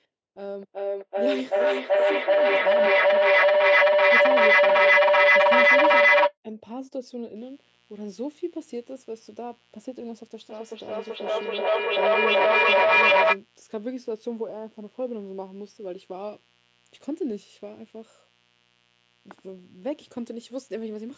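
From 0.39 to 6.37 s a feedback howl takes over: two devices in the same room are looping microphone to loudspeaker with gain on every trip, so the sound narrows to a tone around 500 Hz, pulsing roughly every 0.4 s and peaking about 14 dB above the speech. Unlike an echo, it holds one pitch rather than repeating the speech.

From 7.36 s to the end at 21.17 s a mains buzz sits under everything, roughly 30 dB below the speech. Sharp switching spikes twice per 60 Hz cycle spread harmonics well up the spectrum, giving a raspy, steady edge rather than a smooth low hum. It never varies with the talking.

Between 10.5 and 13.42 s a feedback echo between two devices appears: one device replays what the other's microphone sent, and that microphone picks it up again, outside either echo canceller's reach. The speech comes back at a regular interval of around 0.4 s, thinner and more ringing each pass, reaching about 12 dB above the original. 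Unlike the earlier howl, the repeats are recognisable speech rather than a single tone.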